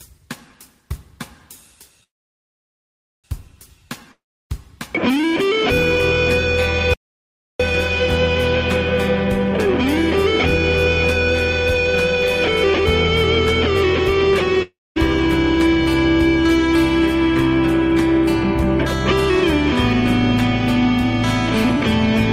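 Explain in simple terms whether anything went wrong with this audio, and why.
Three kinds of fault can be heard.

Call audio freeze, 2.03 to 3.26 s: the sound stops, trails off briefly, then goes quiet for about 1.2 seconds. When it resumes, it picks up exactly where it left off, so nothing is lost and everything afterwards simply arrives about 1.2 seconds late. The likely cause is network packets being held up until the receiver's small waiting store ran empty. The pause without any skip is what sets it apart from a dropout.

Long network dropout, 4.12 to 4.52 s and 14.62 to 14.98 s: again the sound fades away into quiet, for about 0.4 and 0.33 seconds. This time it comes back further along, skipping about 0.38 and 0.58 seconds of audio that never played. The second gap also lets the playback catch up by roughly a third of a second. The likely cause is a stretch of audio that never arrived over the connection, so the missing part is gone rather than delayed.

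Audio dropout to silence, 6.94 to 7.60 s: the sound cuts off abruptly, with no fading tail, into about 0.66 seconds of total, dead silence, not even background room noise. It then cuts straight back in mid-flow with that stretch gone. The likely cause is the input itself being lost during recording, for example a disconnected device or an accidental mute. The hard cut and the completely empty gap distinguish it from the network faults, which fade out first.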